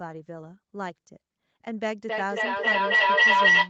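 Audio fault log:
2.09 to 3.69 s, feedback howl: a tone near 2 kHz rises out of the speech and swells to about 14 dB above it, pulsing roughly every third of a second until the clip ends. Sound from one loudspeaker is reaching a microphone on the same call and returning louder on each trip. That gain keeps compounding, and the loop's favoured frequency takes over. The pulse rate follows the loop's delay, and nothing breaks the loop before the audio stops.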